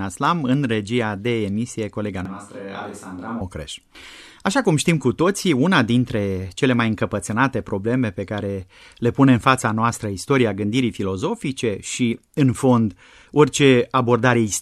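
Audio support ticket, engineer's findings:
Switch to a distant microphone, 2.25–3.41 s. Speech abruptly turns roomy and hollow, thinner in the bass, about 5 dB quieter, with room noise rising to roughly 35 dB below the speech. Likely close-mic signal dropped, pickup falling back to a farther mic such as the camera's. Abrupt return to close sound at 3.41 s.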